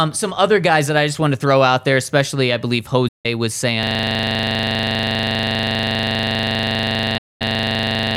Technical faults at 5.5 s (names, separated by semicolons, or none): system hang loop